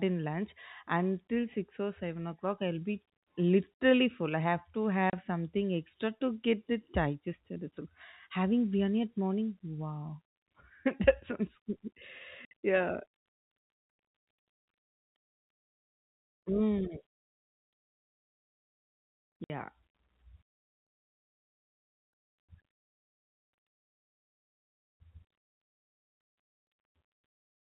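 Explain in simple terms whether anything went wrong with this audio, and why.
Packet loss filled with silence cuts the sound at 5.1 s (between "full I have to" and "something extra to get"), 12.45 s and 19.44 s. Chunks of audio went missing in transit and were replaced by sudden silence, leaving holes of 30 ms and 60 ms. These lengths suggest one lost 30 ms packet, then two lost together. The sound has the narrow quality of telephone coding.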